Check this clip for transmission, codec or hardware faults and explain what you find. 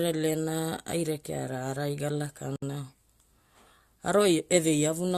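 One fault appears in the speech: a gap at a join of encoded pieces, from 2.56 to 2.62 s. Separately encoded pieces were joined untrimmed, leaving encoder delay and end padding. A gap of about 63 ms opens, its edges smeared so the silent part is shorter, then speech resumes where it stopped.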